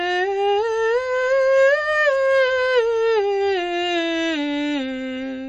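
The music sounds watery and swirly throughout, with nothing above 8.3 kHz, likely MP3 compression at a bitrate around 32 kbps zeroing weak frequency lines.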